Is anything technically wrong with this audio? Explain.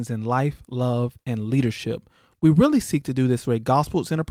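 No, nothing technically wrong stood out on listening to this speech recording.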